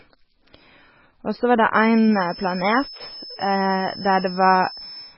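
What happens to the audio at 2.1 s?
A thin, steady whistle near 5.3 kHz sits some 20 dB beneath the speech, swelling and fading slowly in level. It starts at 1.66 s and runs to the end of the clip. This is a feedback whistle: the loudspeaker-to-microphone loop is likely held just short of runaway, so a single high tone keeps ringing.

Under it, the speech sounds watery and swirly, with smeared consonant onsets and nothing at all above 5.6 kHz. This is heavy MP3 compression, likely at a very low bitrate around 16 kbps. The encoder cuts the treble outright and drops weak frequency lines that flicker frame to frame.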